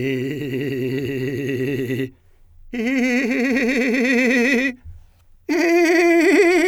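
No technical faults heard.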